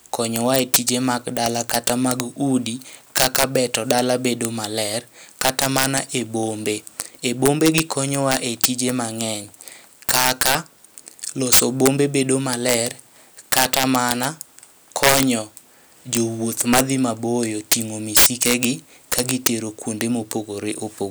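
Throughout the speech, integer overflow: peaks driven about 13 dB too hot wrap to the opposite sign instead of flattening, giving harsh cracks on a small fraction of loud moments, far sharper than clipping.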